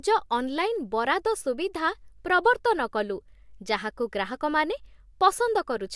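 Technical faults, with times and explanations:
Nothing to flag here, as the recording runs along without any technical trouble worth pointing out.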